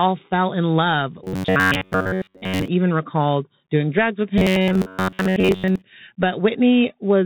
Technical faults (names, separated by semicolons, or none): Bluetooth CVSD headset codec; robotic sound from repeated short buffers